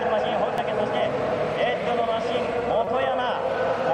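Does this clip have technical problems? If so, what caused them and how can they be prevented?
Yes: a repeated buffer at 0.58 s, where a chunk of about 5.3 ms plays twice and is heard as a click or brief buzz, and again from 2.85 to 2.87 s, where it plays five times in a row and makes a click or brief buzz, dropping roughly 20 ms of audio. The chunk length fits a 256-sample buffer. Unlike a dropout, the gap is filled with copies joined by hard edges, not silence. Enlarging the output buffer or raising the audio thread's priority would prevent it.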